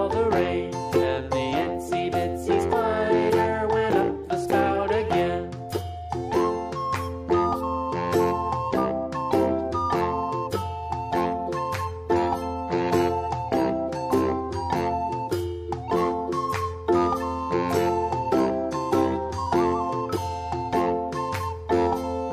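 The audio has one fault: from 11.81 to 13.81 s an adaptive stream at a lower bitrate takes over, with no gap. The treble suddenly stops near 13.6 kHz and codec artefacts rise, which points to a drop from about 96 to 32 kbit/s AAC. On a spectrogram, the top band is visibly cut away for those two seconds.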